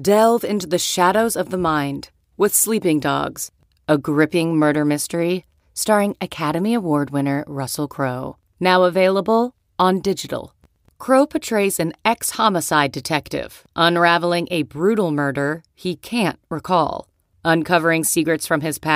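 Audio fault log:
Nothing to log here, as no faults turn up anywhere in this speech recording.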